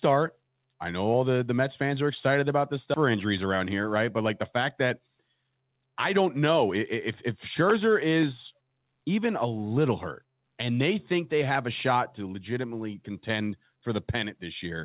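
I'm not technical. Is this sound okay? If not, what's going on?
No. Right after "are excited about this", at 2.94 to 2.96 s, there is a skip ahead. About a second of speech is simply missing, and the audio jumps straight to what came later with no pause or filler sound. That's why it feels like a clean cut rather than a dropout or a stutter.

From 3.14 to 6.66 s comes a jitter buffer speed-up. The call system had too much audio waiting, so it trimmed tiny slivers, roughly a third of a second in total. Speech runs about 8% faster but at normal pitch, so it sounds hurried, not squeaky like a sped-up tape.

The call's phone-style coding carries nothing above 4 kHz, which gives the familiar narrow telephone sound.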